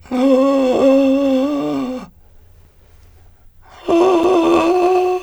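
At 2.65 s and 4.24 s the music drops into a block of digital silence, about 4 and 6 ms long, likely from an unfilled output buffer, with the second gap fitting a 256-sample block. Each is heard as a tick rather than a hole, but unlike a lone click it's a true gap with hard edges and no fade.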